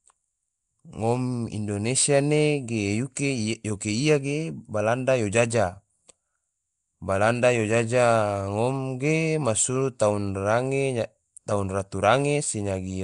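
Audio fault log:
Throughout: Nellymoser compression, likely from the Flash-era Asao codec, gives the speech a rough, hissy halo and smeared, underwater tone as starved bands are filled with noise; a spectrogram shows grainy noise patches between harmonics and nothing above 10.6 kHz.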